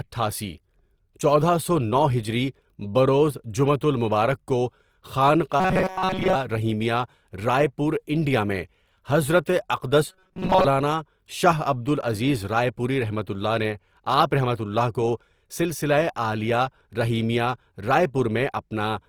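The clip is speech. Throughout, the sound is grainy and rough, with a noisy edge rather than swirling, though content still reaches about 20.3 kHz. That points to Opus compression in its music mode, likely at around 24 kbps, where filled-in bands turn clean tones coarse. Two stretches, from 5.60 to 6.36 s, just before "رحیمیہ رائے پور انڈیا", and from 10.10 to 10.66 s, become a rigid metallic buzz at 188 Hz. This is robotic sound from repeated short buffers. The likely cause is most of the audio being replaced by repeats of a slice about 5.3 ms long.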